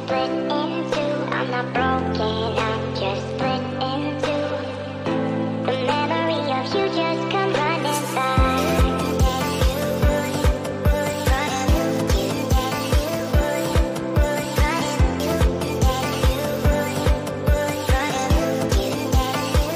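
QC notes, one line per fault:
No faults found. Nothing in the audio calls for a QC entry.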